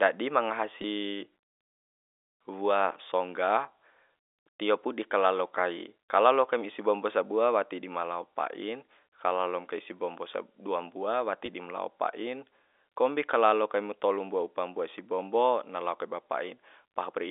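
Two short dropouts show up as packet loss with pitch repetition: 0.82 to 0.84 s, then 11.46 to 11.48 s, between "dua mbua" and "dim lao pa'i kombi". Each gap is about 20 ms, which fits a single lost packet. The receiver loops the last pitch period across the hole, so you get a brief held, slightly buzzy blip over the telephone-band G.711 line.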